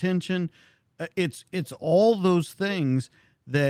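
No technical faults are audible anywhere in the speech.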